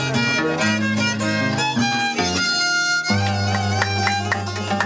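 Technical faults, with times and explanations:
Nothing stood out on listening.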